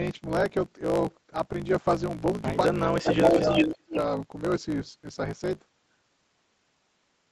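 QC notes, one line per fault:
Throughout: block size mismatch (truncated). A steady buzz at 54.4 Hz sits under the whole speech track, and the talker runs about 1.16 times too fast while the pitch stays near normal. One stage hands over blocks longer than the next stage reads, so the tail of every block is discarded. The repeating cut at each block boundary produces the buzz. The missing material shortens the timeline, which fits blocks written at 1024 samples.
2.75–3.64 s: speech suppressed in double talk. The near talker's level falls away, dropping by around 30 dB at the deepest point, for roughly 0.7 s in total within this span. The likely cause is the echo canceller meeting both sides talking at once. Unable to tell this talker from the loudspeaker echo, it attenuated everything, so the voice dips instead of riding over the far side.
3.08–3.96 s: echo leak. A delayed copy of the speech trails the original by 0.44 s, at a level roughly 5 dB relative to the direct speech. 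The likely cause is a far end listening on a loudspeaker whose echo canceller failed to remove all of what its microphone picked up. The leftover was sent back down the line, overlapping the suppression dip just before it.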